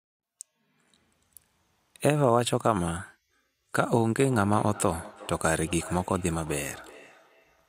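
From 4.19 s to the end of the clip, a second device in the same room is on the call and plays back what the first microphone sent. That microphone picks the playback up again, and its echo canceller ignores it because the sound comes from another device. The result is feedback echo between two devices: the speech comes round again roughly every 400 ms, peaking about 19 dB below the direct speech, thinner and more ringing than the original.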